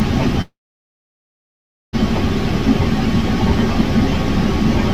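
Long network dropout, 0.41 to 1.95 s: a short fading buzz or hiss gives way to 1.4 s of silence, likely from lost packets, and 1.52 s never returns.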